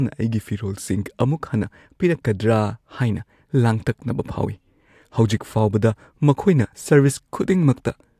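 No technical faults can be heard anywhere.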